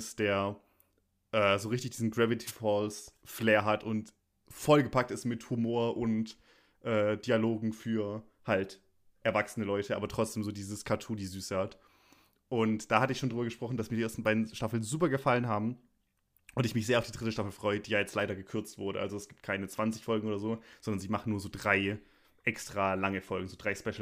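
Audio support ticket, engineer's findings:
Wireless microphone noise hit at 2.46–2.52 s: short swish of static, about 60 ms, over the speech. Probable component: analogue FM radio mic link. Mechanism: multipath reflections cancelling, signal fades, receiver noise jumps up. Worth checking antenna placement and line of sight to the receiver, since one brief dropout fits a momentary null.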